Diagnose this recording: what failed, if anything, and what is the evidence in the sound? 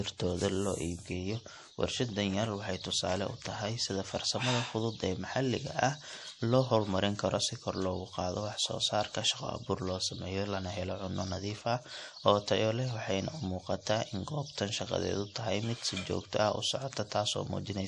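The codec stage is the weak point: the speech was likely squeezed through MP3 compression at a low bitrate, which fits something around 48 kbps. Throughout the clip, nothing is left above 11.4 kHz, where the encoder has cut the top band to save bits. Below that cutoff the coding damage is plainly audible, as faint spectral lines are dropped and restored from frame to frame, leaving a watery texture on the speech.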